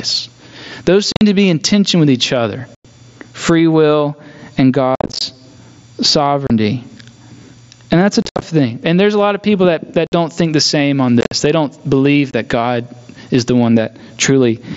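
Gain pumping runs through the whole clip: the gain swings by around 20 dB, pulling loud and soft parts closer together, likely from too much mic gain driving a fast limiter. Then there's unconcealed Bluetooth headset packet loss, with abrupt holes at 1.12, 2.75 (after "tension with each other"), 4.95, 6.47, 8.22 (after "that's a"), 10.07, 11.21 and 12.31 s. These run about 20 to 170 ms, and the longer ones sound chopped and rough.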